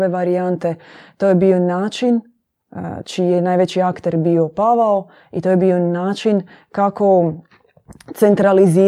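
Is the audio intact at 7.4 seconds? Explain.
No. At 7.4 seconds the speech falls inside a run of clock slip clicks lasting from about 0.15 to 8.82 s. The likely cause is two unsynchronised clocks drifting apart by a few hundred parts per million, so a single sample is dropped or repeated roughly every 70 ms. This gives a faint, steady ticking or soft rattle. On a spectrogram it appears as thin, evenly spaced vertical lines. In the waveform it shows as tiny one-sample steps.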